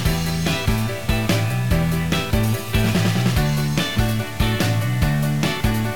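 Likely quantisation to just 5 bits by truncation without dither runs through the whole audio, leaving gritty, signal-following distortion roughly 20 dB below the signal.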